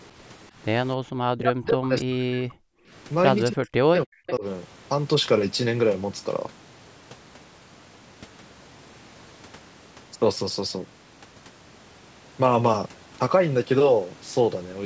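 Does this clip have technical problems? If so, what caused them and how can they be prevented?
Yes. There are three kinds of fault.

Background gated by the echo canceller: from 0.99 to 1.08 s, the room sound drops out for about a tenth of a second. The level falls by about 40 dB, then returns. The loudspeaker was playing at that moment. The echo canceller took the microphone signal for echo and turned it down hard. It released the gate once the loudspeaker went quiet. Gentler suppression, or a canceller that adapts better to the room, would prevent this.

Speech suppressed in double talk: from 1.36 to 2.75 s and from 3.49 to 4.44 s, the speech dips very deeply. It fades or breaks up over most of each stretch. The likely cause is both sides talking at once. The echo canceller could not tell the local talker from the loudspeaker echo, so it turned everything down. A canceller with proper double-talk detection, or a headset, would prevent this.

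Echo leak: from 4.27 to 4.32 s, a brief delayed copy of the speech comes through. It lags by 318 ms and sits well below the main voice. One side was likely playing the call on a loudspeaker, and its echo canceller missed part of what the microphone picked up. That residue was sent back. Using headphones on that side, or a canceller that converges fully, would prevent this.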